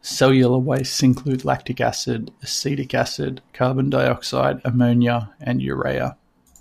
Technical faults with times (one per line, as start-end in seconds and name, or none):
none